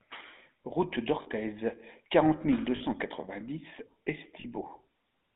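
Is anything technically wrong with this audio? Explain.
Yes, two problems. The whole clip goes through the GSM full-rate codec, which points to a 13 kbps phone channel: the band runs about 200 Hz to 3.7 kHz, and the pulse-driven vocal model leaves the speech plainly buzzy and gravelly. There are lost GSM frames at 1.22 s, 2.76 s right after "quarante mille deux", and 4.4 s. Each gap is about 40 ms, which fits two dropped frames. The decoder repeats the last good frame, so each spot gets a short rough, metallic ring.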